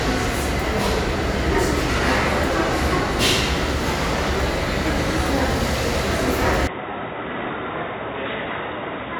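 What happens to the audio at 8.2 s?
At 8.2 s the sound is inside a stretch that runs from 6.67 s to the end of the clip. It suddenly turns dull and boxy, with nothing above 3.8 kHz. It also drops by roughly 10 dB, and a new, faint background noise appears. There is no gap at the change. This points to the input switched to a poorer device, likely a narrower-band microphone or a headset's call profile with its own tone and noise.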